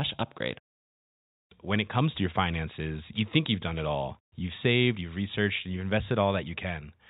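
Nothing stood out on listening to this speech recording, which carries the narrow band of G.711 telephone coding.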